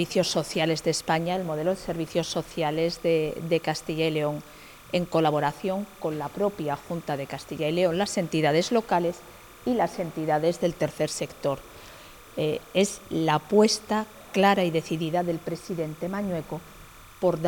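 A steady chirping warble sits quietly behind the sound from start to finish, well below it. This is timecode bleed: 29.97 frames-per-second linear timecode switching near 1 and 2 kHz, leaking in from a neighbouring track or cable.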